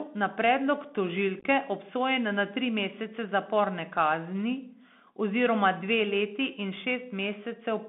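The whole recording is carried over the Bluetooth CVSD headset codec, which fits a 64 kbps link. The speech is confined to roughly 200 Hz to 3.5 kHz. The one-bit adaptive step cannot keep up with fast changes, so sibilants turn scratchy. A granular hiss sits underneath.

From 1.40 to 1.45 s, between "na predlog" and "obsojen na", there is unconcealed Bluetooth headset packet loss. About 37.5 ms of audio vanishes across 52.5 ms, and the longest gap is 15 ms. That fits around ten lost packets. The result is a brief, choppy crackle with abrupt edges.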